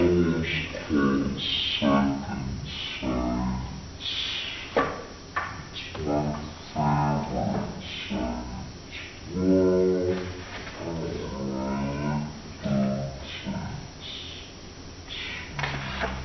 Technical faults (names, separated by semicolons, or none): wrong sample rate